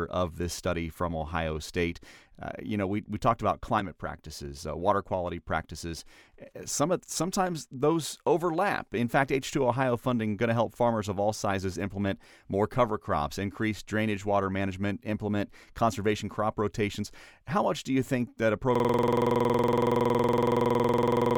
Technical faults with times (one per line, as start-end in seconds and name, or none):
18.75-21.37 system hang loop